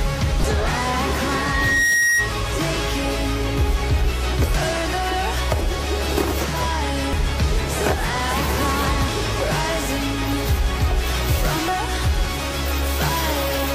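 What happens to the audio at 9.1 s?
At 9.08 s, damaged data in a compressed stream makes the decoder misread a frame and lose sync while it hunts for the next header, producing a brief chirp or blip.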